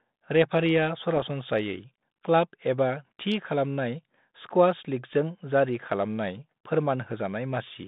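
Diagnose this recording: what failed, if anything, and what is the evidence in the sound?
Bit errors on an ADPCM link, at the transmission stage: from 1.16 to 1.23 s the speech breaks into pops and a rough, level-jumping burst. Unlike packet loss, nothing goes silent. Flipped bits, at an error rate of perhaps 0.3 percent, derail the decoder's adaptive step size and predictor, so the distortion rings on briefly.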